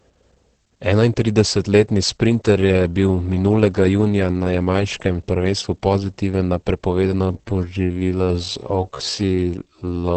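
Throughout, the speech sounds muffled and hoarse, with nothing above 8 kHz, likely from Opus compression in its speech mode at a low bitrate near 12 kbps. From 7.17 s to the end, after "jamajškem prvenstvu pozitiven na", the pace drops to about 0.58 speed while the pitch holds, and the audio drags, likely a time-stretched section.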